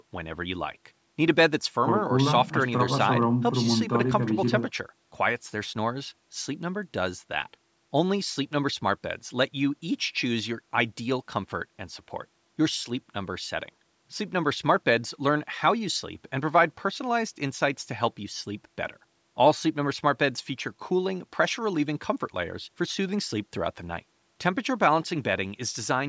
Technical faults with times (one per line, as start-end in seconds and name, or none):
none